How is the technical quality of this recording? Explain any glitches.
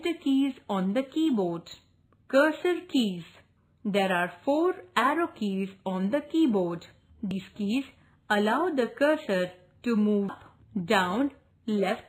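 Three very brief glitches mark the recording, at 3.57, 7.31 and 10.29 s. Each is damaged data in a compressed stream. Corrupt bytes confuse the decoder, which loses frame sync and hunts for the next header. Each event is a tiny blip of a few milliseconds.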